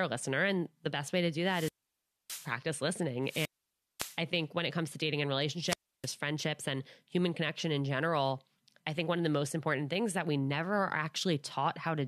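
Between 1.44 and 2.54 s, 3.23 and 4.19 s, and 5.66 and 6.09 s, the speech suffers wireless microphone squelch dropouts. Each time, the FM radio signal weakens and hiss rises. The receiver's squelch then mutes the output for about 0.61 s, 0.55 s and 0.31 s before the speech returns. On a spectrogram, broadband noise swells into a blank gap, and the waveform drops to a flat line.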